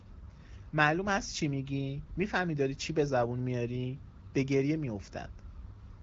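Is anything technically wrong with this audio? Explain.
No, nothing stood out as technically wrong when listening to this speech recording.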